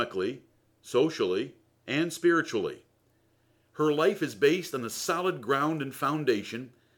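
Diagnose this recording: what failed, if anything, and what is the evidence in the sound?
From 3.36 s, after "socially and spiritually", a hiss tracks loud, bright speech: sample clock jitter in the converter, with microsecond-scale timing wobble mistiming steep waveform slopes.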